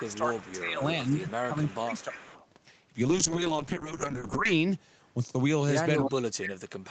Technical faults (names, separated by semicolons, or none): echo leak; speech suppressed in double talk; call bitrate drop